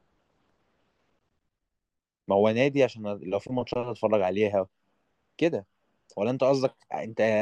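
No technical faults detected.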